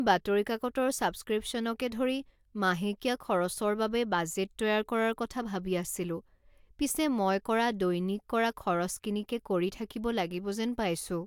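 Nothing in this speech recording stands out as a technical problem; there's no audible fault anywhere in it.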